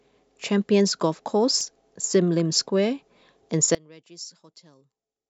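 A damaged spot on the disc, passing under the laser on three successive turns, leaves more corrupted data than the error correction can rebuild. These are CD scratch ticks: the player has to patch or mute the lost samples each time. Between 1.46 and 1.76 s the speech carries three short ticks, each well under a millisecond, spaced at the disc's rotation rate rather than following anything in the sound itself.

From 3.75 s to the end, the level drops by about 23 dB and the centre of the speech seems to collapse. The likely cause is one channel inverted: one side of the stereo pair has its polarity flipped, so when the two are combined to mono, everything common to both cancels. The centred voice largely disappears, leaving only the faint residue of whatever differed between the channels.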